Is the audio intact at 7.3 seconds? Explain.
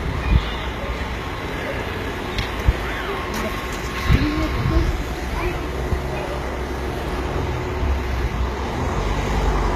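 No. At 7.3 s, as throughout the clip, the audio carries HE-AAC compression damage, likely from the codec coding only the lower spectrum and rebuilding the treble by copying lower bands upward under a coarse envelope. The damage is plainly audible and points to a very low bitrate, around 20 kbps. The result is synthetic, gritty, metallic top end with mismatched harmonics above the crossover, and nothing at all above about 14.9 kHz.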